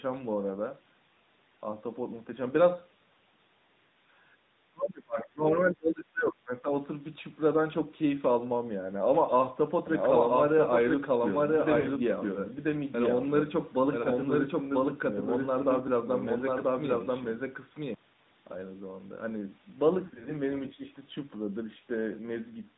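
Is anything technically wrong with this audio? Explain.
Yes. The whole clip has passed through the AMR narrowband mobile codec, running at a rate consistent with about 10.2 kbps. That codec samples at 8 kHz and rebuilds speech from a vocal-tract model fed by a few pulses per 5 ms subframe. Nothing above 4 kHz survives, so the speech sounds boxed-in and dull. The damage is plainly audible, with a buzzy, synthetic edge on the voicing and a thin, muffled top end throughout.

From 9.86 to 17.94 s there is a doubled audio track. This is likely a second, slower capture path feeding the same audio into the mix. A full-band copy trails the original by roughly a second at about the same level. It has no reverb or room colour, so it sounds like an overlapping repeat rather than an echo. It appears and vanishes abruptly at both ends.

Lost AMR speech frames occur three times. Each time, frames failed their checksum and the decoder filled the gap by reusing the last good pitch and vocal-tract settings at decreasing gain. 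At 11.80 to 11.87 s, 40 ms goes missing, heard as a short smeared dip. At 14.02 s a single 20 ms frame gives a brief warble. From 20.06 to 20.32 s, 120 ms of losses in runs of up to 40 ms spread over 200 ms. This produces a stuttering, drawn-out stretch where the sound sags and returns rough before recovering.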